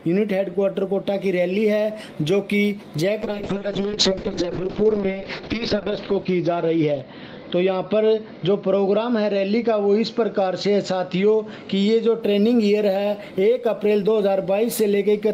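A call bitrate drop runs from 3.23 s to 12.27 s. The connection's bandwidth estimate fell and the encoder was pushed to spend far fewer bits, so everything is coded more coarsely and the top end is trimmed from about 20 kHz down to 6 kHz. The sound turns muffled and rough, with a watery grain, and it is worst for about 2.4 s, which fits a rate sliding from around 32 kbps to near 6 kbps, before clarity returns.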